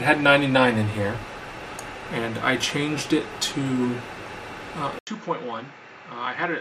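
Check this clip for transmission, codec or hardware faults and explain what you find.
One fault, near the end. At 4.99 s the input was likely switched to a poorer device, either another microphone or a headset's call profile, and it stays on that device to the end of the clip. The switch leaves a gap of about 80 ms. After it, nothing passes above 7.6 kHz, so the sound turns duller. The level drops by roughly 10 dB, and the new device adds its own background noise, sitting around 55 dB below the signal.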